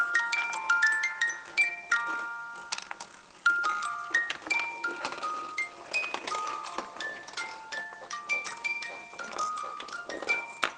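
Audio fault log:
No fault found in this audio.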